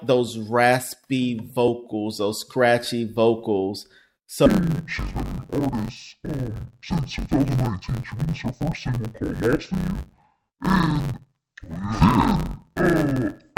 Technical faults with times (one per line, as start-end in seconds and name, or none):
4.46-13.58 interleaved audio read as planar